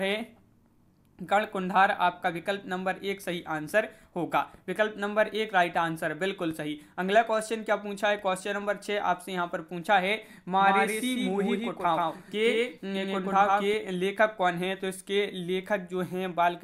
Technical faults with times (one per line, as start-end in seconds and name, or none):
10.60-13.74 doubled audio track